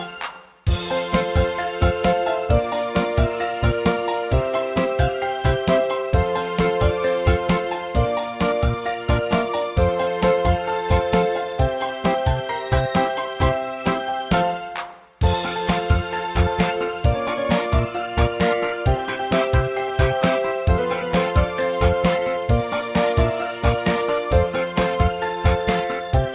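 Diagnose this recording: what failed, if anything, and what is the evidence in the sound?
Nothing stood out on listening that would point to a failure at any stage of the chain.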